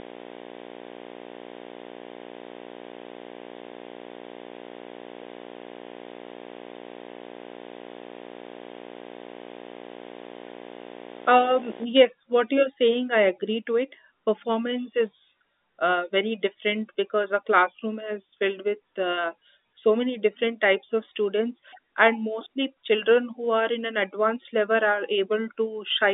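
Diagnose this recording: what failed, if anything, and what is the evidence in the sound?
A harsh buzz with a gritty hash riding above it runs under the speech from the start until about 11.8 s, then stops. It is loud, only around ten decibels below the speech, and its fundamental sits at 60 Hz, the field rate of a video signal. This is video or display buzz entering in the analogue wiring: a screen or video cable near the audio path couples its field-rate pulses into the line. Because the whole recording passes through the 300 to 3700 Hz band of G.711 telephone coding, the buzz comes through as its harmonics and hash rather than as a deep hum.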